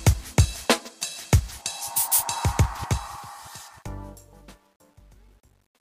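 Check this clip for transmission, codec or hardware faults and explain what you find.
One fault turns up: truncation distortion on a fade, from 2.43 s to the end at 5.89 s. The fade-out that begins around 2.4 s runs through a gain stage that keeps too few bits and adds no dither; the step size points to roughly a 10-bit word length. As the level shrinks toward that smallest step, the waveform collapses into a few square steps, so the tail grows gritty, worst from 3.77 s to 5.89 s.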